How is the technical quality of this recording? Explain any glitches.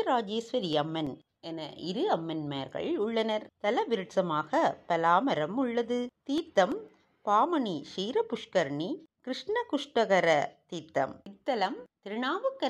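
There's one recurring problem: CD scratch ticks, in two bursts. Five ticks run from 0.73 to 1.40 s and four from 6.38 to 6.89 s, the longest about 1.5 and 2 ms, about seven or eight a second. A blemish is wiping out more data than error correction can rebuild on each disc turn, so the player patches or mutes those samples.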